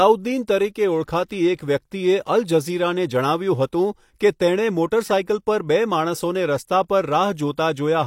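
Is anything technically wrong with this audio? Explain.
Yes. Pre-echo appears at 1.56 to 1.59 s, smeared over 27 ms, and again at 4.19 s across about 17 ms. The codec's block-wide quantisation noise leaks ahead of a sharp onset, so a short hiss precedes each attack. A spectrogram shows a broadband haze before the transient, and the waveform shows low noise ahead of the attack edge.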